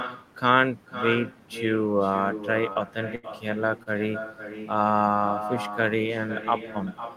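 A speech recording in which every phrase is trailed, about half a second later, by a quieter, thinner copy of itself, sitting about 10 dB below the direct speech. This is echo with no canceller: the far end's loudspeaker output reaches its microphone and is sent back unremoved, arriving after the network round trip. Brief smears or wobbles appear at 2.73 to 2.77 s and 3.83 to 3.88 s. These are short concealed packet losses, where about 20 ms of audio failed to arrive and the receiver extended the preceding sound for 20 ms and 28 ms respectively before blending back in. From 3.15 to 3.25 s the sound turns into a held, fading buzz or hiss and then resumes further along. That is a burst of packet loss: about 80 ms went missing, and the decoder stretched and faded the last sound across roughly 76 ms, so that stretch of speech is gone.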